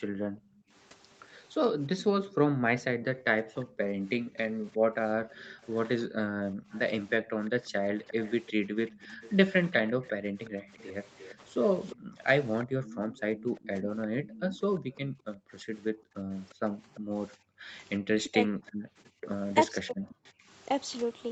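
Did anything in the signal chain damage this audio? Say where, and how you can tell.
Yes. At the call-processing stage, the echo canceller's suppressor clamps the room tone: a brief dip from 0.56 to 0.72 s of about 27 dB, then gating across 2.27 to 7.37 s (about 22 dB) and 10.21 to 20.47 s (as deep as about 40 dB). The ambience pumps out and back as the canceller engages.

There's echo leak too: a faint copy of the speech trailing by 348 ms, at 2.0 to 2.84 s, through 5.63 to 14.98 s, and at 16.49 to 17.0 s, sitting about 20 to 30 dB down. That's likely the far end's canceller failing to fully remove its loudspeaker pickup.

Then speech suppressed in double talk: a quick dip of roughly 10 dB at 16.66 to 16.70 s, and heavier chopping between 18.28 and 20.18 s, with pieces pulled down by as much as about 40 dB, adding up to about half a second. The likely cause is the canceller mistaking overlapping talk for echo and ducking both.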